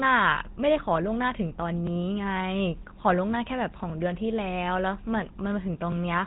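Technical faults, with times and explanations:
Throughout: GSM full-rate codec. The speech passed through the old GSM full-rate coder, which models the vocal tract and excites it with a sparse pulse train, which fits roughly 13 kbps. Nothing survives above 3.8 kHz, and the crude excitation gives voiced sounds a plainly audible buzzy, gravelly roughness.
1.87, 3.90, 5.92 s: overlapping chunks. The audio was handled in chunks about 2.0 s long, each beginning slightly before the previous one finished, so 25 ms of sound plays twice at every join. That duplicated sliver is heard as a brief click or stutter recurring every two seconds.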